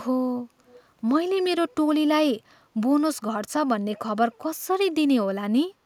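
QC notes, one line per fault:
0.66–0.77 s, echo leak: a faint copy of the speech returns 331 ms late, a distinct repeat rather than a smooth reverb tail, likely from an echo canceller missing the loudspeaker pickup.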